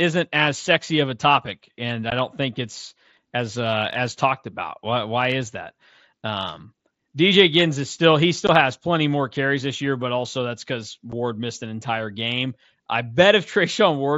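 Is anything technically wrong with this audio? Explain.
Yes. Three brief, hard-edged dropouts punch holes in the speech: at 2.10 s, between "of a topic and" and "don't think it's as"; at 8.47 s, after "is still he"; and at 11.12 s, after "but also that's because". Each gap is abrupt. This is unconcealed Bluetooth headset packet loss: voice packets between headset and phone went missing and were replaced by silence or an idle pattern rather than patched over. The first two gaps last about 15 ms and the third about 7.5 ms, which fits two lost 7.5 ms frames and then one. The surrounding audio carries the mSBC headset codec's light graininess, with content up to 8 kHz.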